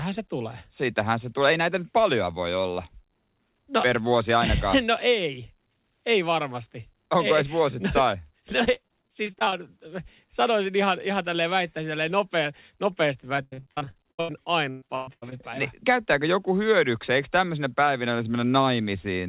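Repeated packet loss (robotic sound) hits this speech twice, with the narrowband call path capping everything at 4 kHz, which points to a G.711-style codec. From 8.64 to 9.59 s, many brief holes, none longer than about 21 ms, are patched by extending the preceding sound, giving a choppy stretch. From 13.36 to 15.34 s the losses run longer, up to about 118 ms, and nearly half the span is concealed, so the speech turns choppy with pieces dropping out.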